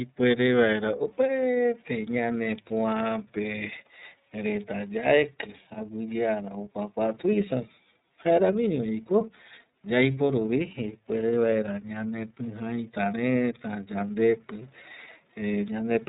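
Throughout, the speech carries plainly audible iLBC codec damage. Nothing above 3.8 kHz survives. Independently coded frames, fitting 30 ms ones, sound rough and synthetic.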